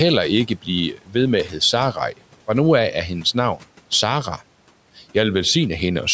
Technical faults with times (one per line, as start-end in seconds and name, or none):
0.48-0.68 speech cut by the noise suppressor
0.93-1.15 speech cut by the noise suppressor
1.45-1.61 speech cut by the noise suppressor